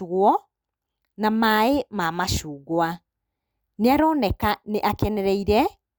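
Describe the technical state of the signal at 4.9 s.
At 4.9 s the signal is intact, with no audible dropout, distortion, clipping or other fault at that point.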